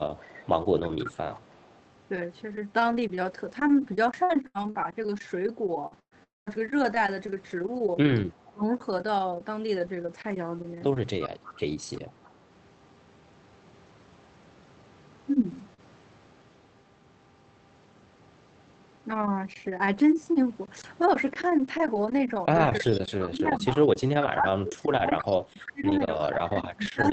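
From 4.23 to 6.50 s the speech turns choppy and metallic. This is repeated packet loss, heard as robotic sound. Five separate gaps fall in this stretch, the longest 119 ms, and about 320 ms of audio is missing in total. The receiver papers over 347 ms by stretching the last sound, so about 15% of the span is synthetic. It differs from a single dropout because the holes keep recurring, with real audio between them.

At the tail of that stretch, from 6.23 to 6.49 s, the sound thins into a fading buzz and then falls to silence for about 200 ms before the speech resumes with a piece gone. The likely cause is a long network dropout rather than one more short gap. Around 240 ms never arrived, and 230 ms of it was bridged by continuation. The continuation runs out of material and decays into silence instead of smearing straight back into the speech.

At 15.50 to 15.54 s there is no gap at all, only 40 ms of rougher, noisier sound. 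This is a lost packet rebuilt from error correction. The decoder played the low-bitrate copy carried in the next packet, so the timing stays intact. Because this call is already band-limited to 8 kHz, there is no extra loss of top end to listen for, just the brief coarseness.

Shortly after, from 15.74 to 15.81 s, comes a short concealed packet loss. About 40 ms never reached the decoder in time. The receiver filled 33 ms by extending the preceding sound and then blended back, which leaves a quick smear or wobble. Unlike the error-corrected frame just before it, this patch is invented from what came before rather than decoded from a real copy, so it sounds smeared rather than merely grainy. The Opus call path itself, running at 32 kbps, is audible only as its 8 kHz ceiling and its usual coding noise.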